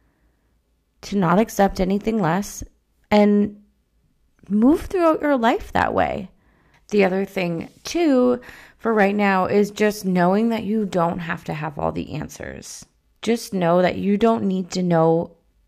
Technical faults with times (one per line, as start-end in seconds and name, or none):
none